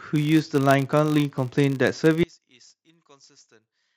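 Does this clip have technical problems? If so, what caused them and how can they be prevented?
Yes. A filter restarted on every block, dropping its state and starting each block from silence, so a 100 Hz buzz runs through the whole clip. Carrying filter state across block boundaries prevents this.

From 2.23 s to the end, one channel was likely inverted, so the mono sum cancels and the speech falls by about 27 dB. Checking channel polarity before summing to mono prevents this.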